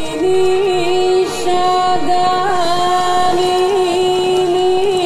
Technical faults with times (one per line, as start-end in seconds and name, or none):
1.54-4.96 train of clicks